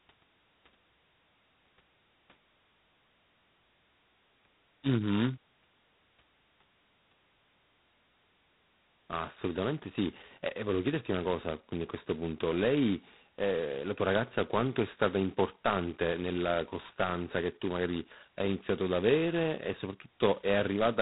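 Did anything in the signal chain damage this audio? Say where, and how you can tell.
Yes. Throughout, a harsh, rasping hiss tracks the speech level and nothing passes above 3.9 kHz. That is codec-stage G.726 ADPCM, coarse enough to point to 16 kbit/s.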